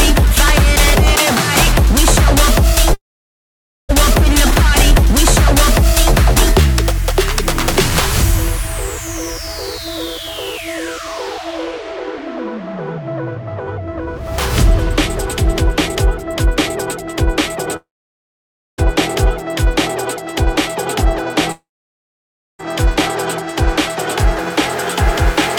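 The audio cuts out three times, at 2.93 to 3.91 s, 17.76 to 18.80 s and 21.52 to 22.63 s. Each gap is a brief fading buzz or hiss, then roughly a second of near-silence, and the sound resumes with about a second skipped. This is likely a long network dropout, with the receiver briefly extending the last sound before going quiet.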